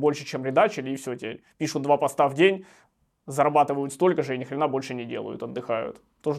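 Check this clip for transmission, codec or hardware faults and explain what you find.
Having checked the clip, I find nothing to explain.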